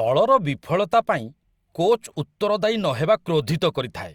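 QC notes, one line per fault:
No faults found in this speech clip.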